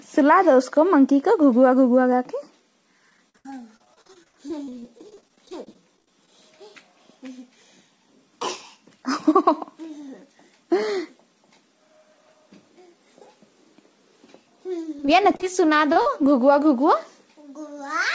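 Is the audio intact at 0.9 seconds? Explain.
Yes, the audio is intact at 0.9 seconds, with nothing audible above 8 kHz, as expected from a call path consistent with the G.722 codec.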